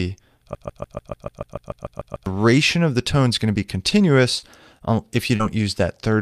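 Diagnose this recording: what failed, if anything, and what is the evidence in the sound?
From 0.55 s to 2.26 s, a 146 ms fragment repeats exactly, back to back, twelve times. This is a broken-record loop. The repetition is seamless and mechanical, with no variation between passes. The stage is the playback or buffering path. The likely cause is a player or stream stall that kept re-sending the last fragment it held. Whatever audio belonged in that 1.7 s stretch is gone.

Four short smears occur at 3.89 s, 4.39 s, 4.78 s and 5.36 s. Each is a brief smear or wobble before the sound resumes. This is short concealed packet loss in the network path. The holes are 20, 40, 20 and 40 ms, which fits 20 ms packets arriving late. The decoder extended the last sound for 16 to 35 ms, then crossfaded back. The last repair also stretches the timing slightly.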